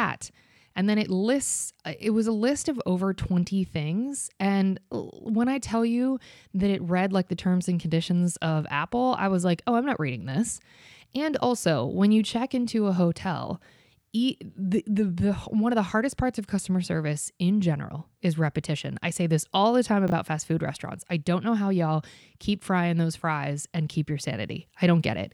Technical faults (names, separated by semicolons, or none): chunks out of order